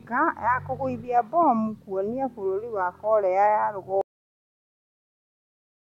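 At 4.01 s, just after "bũrũri wa korea ya", the speech has a cut-off end. The voice stops in the middle of a sound. There is no natural fade or room decay. The signal falls straight to digital silence. That silence runs for the last 1.9 s of the clip. The final stretch of audio was never written or played out. The recording therefore ends abruptly, with the phrase left unfinished.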